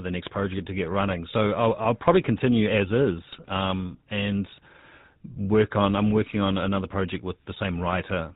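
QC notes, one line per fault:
Throughout: GSM full-rate codec. The speech has a plainly audible buzzy, gravelly roughness. The codec rebuilds the voice from a vocal-tract model fed by regular pulses. Only every third excitation sample survives, so fine detail turns coarse and rasping. Nothing above 4 kHz gets through, which leaves the sound narrow and dull. The damage and the missing top are consistent with a bitrate near 13 kbps.
3.32–3.51 s: GSM bit errors. This comes just after "I'll probably continue as". The speech breaks into squawks, pops and gargling for about 0.19 s. Corrupted bits are reaching the decoder. Wrong filter, pitch or gain values warp the spectrum and throw the level around frame by frame. The length of the burst suggests several consecutive frames were hit, in line with a bit error rate around 2 percent.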